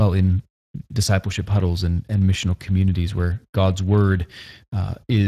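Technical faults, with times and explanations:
Throughout, Speex codec: the speech was encoded with Speex, a CELP coder that rebuilds the voice from a predictive filter driven by a coarsely coded excitation signal. The bit budget for that excitation is tight, and the plainly audible damage fits a setting of around 22 kbps. Too few excitation bits leave the speech grainy and hoarse instead of clean, and nothing survives above 15.4 kHz, so the top of the band is cut off.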